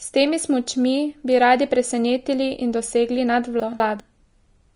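It's a speech clip, and the whole thing has that hissy, grainy quality with nothing above 10.6 kHz, smeared consonant attacks and treble that's turned to coarse noise, so it's likely Vorbis compression, fitting a low bitrate around 35 kbps. Then, right after "radi presenetili in dosegli", from 3.6 to 4.0 s you get chunks out of order: two 200 ms pieces play swapped, with one arriving a chunk late, so the sound jumbles briefly.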